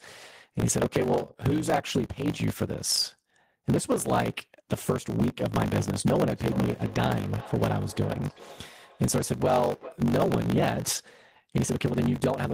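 A steady 50 Hz buzz runs through the whole speech clip, and everything moves about 1.16 times too fast while keeping close to normal pitch. This is a block size mismatch (truncated): one stage writes longer blocks than the next reads, which fits 1024-sample blocks, and the tail of each block is discarded.

From 6.36 s to 10.08 s, the speech returns as thin, ringing repeats roughly every 400 ms, peaking about 17 dB below the speech. This is feedback echo between two devices: one device replays what another's microphone sent, that microphone hears it again, and neither echo canceller removes the other device's playback.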